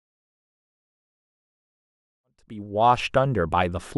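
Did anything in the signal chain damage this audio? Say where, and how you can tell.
No, nothing stood out on listening, and the gradual fade-in that rises from about 2 s to 3.35 s is a smooth edit with no click or hard edge rather than any damage.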